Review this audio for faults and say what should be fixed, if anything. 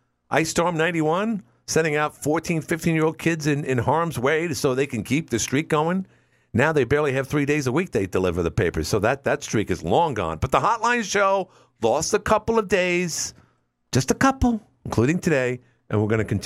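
Nothing in the speech recording needs fixing, since no technical fault can be heard anywhere in the signal.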